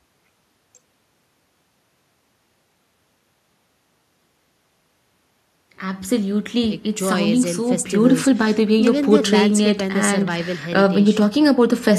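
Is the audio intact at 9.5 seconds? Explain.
Yes, the speech at 9.5 seconds is intact, with no audible fault at that moment.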